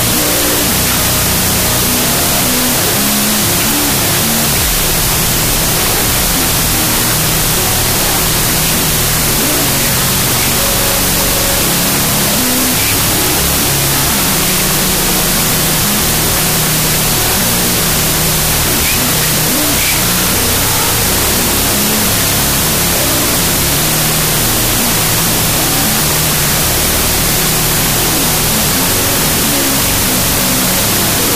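Throughout the clip, samples stored as 32-bit floats are being read as 16-bit integers, a wrong sample width that splits each value into two halves, only some of which keep the top bits of the real signal. The result is loud, harsh noise with the real sound buried inside, playing at half speed and an octave low.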